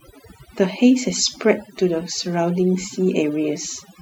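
Right from the start and all the way through, there's overdone noise removal: the denoiser was pushed too hard, muting individual frequency bands near its noise estimate along with quiet speech detail. So the background drops and breaks up into twinkly specks.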